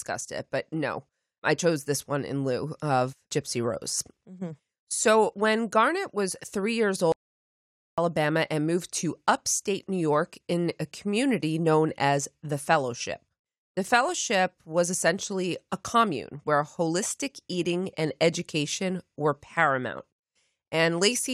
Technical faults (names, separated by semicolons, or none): audio dropout to silence